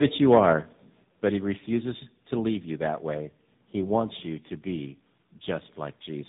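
Tandem speech coding runs throughout: the speech passed through two low-rate speech codecs in a row, which fits GSM full rate followed by AMR-NB, the later one re-coding the earlier one's already damaged output. Nothing remains above 3.8 kHz, and the speech sounds rough, muffled and warbly.

Microphone volume stepped down at 1.02 s: the level of both speech and background drops suddenly by about 4 dB in one step. The likely cause is the call software lowering the device's input volume after judging the microphone too loud.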